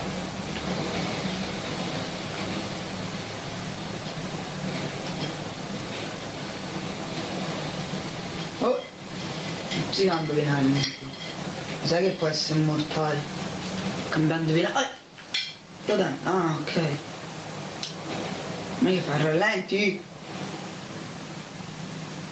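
Throughout, the gain swings by roughly 20 dB, squashing loud and soft parts together. This gain pumping is likely from the input gain being set far too high, with a fast limiter clamping each peak.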